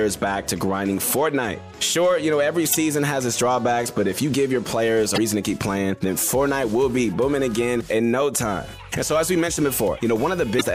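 Damaged data in a compressed stream causes brief blips at 2.71–2.75, 5.14–5.18 and 10.57–10.61 s, where the decoder loses frame sync.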